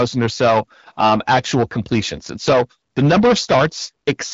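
Hard clipping runs through the whole speech clip. The signal is driven about 11 dB past what a stage could pass, so roughly a tenth of samples hit the ceiling and flatten. Every loud syllable turns into harsh fuzz with added high harmonics. The band stops near 7.4 kHz, which fits the AMR wideband (HD Voice) codec, whose own coding damage is light.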